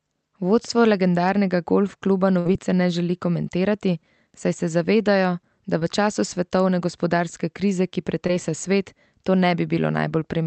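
At 2.39 to 2.47 s, between "legendarnega golf kluba" and "ne želi komentirati saj", a burst of packet loss drops about 60 ms of speech. The receiver continues the last sound, fading it down for roughly 57 ms, then jumps ahead. Unlike a brief glitch, this leaves a hole in the speech.

Short concealed packet loss follows at 5.79 to 5.83 s, just before "v času svetovne gospodarske", and at 8.27 to 8.31 s, between "svetovne gospodarske krize ki" and "svet to". Each replaces about 20 ms with continued sound, heard only as a quick smear before the speech blends back.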